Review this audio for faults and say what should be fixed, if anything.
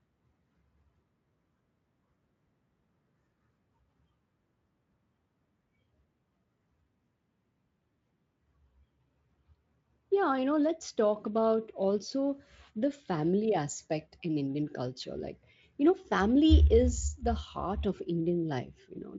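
No faults found here, so nothing needs fixing.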